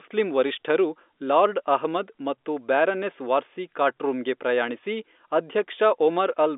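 The audio contains no faults.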